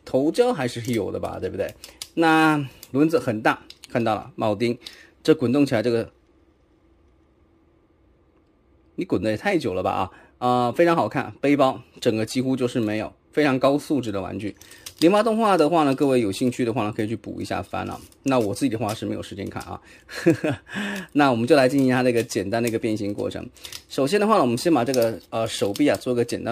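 Crude rate conversion runs throughout: unfiltered nearest-sample picking, which fits a 48 kHz to 44.1 kHz change, adds a gritty, inharmonic fizz roughly 30 dB below the audio.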